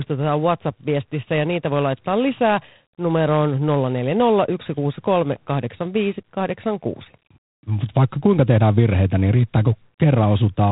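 Throughout, G.726 ADPCM coding leaves a rasping hiss that swells and fades with the speech, unlike steady line noise, and cuts everything above 4 kHz, which fits 24 kbit/s.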